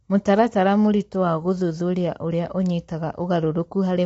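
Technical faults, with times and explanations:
Throughout, low-delay AAC compression: the speech sounds plainly rough and grainy, with noise between the pitch harmonics and nothing above 7.8 kHz. The likely cause is AAC-ELD coding, whose coarse quantization at low bitrate leaves noise between the harmonics, at what sounds like about 24 kbps.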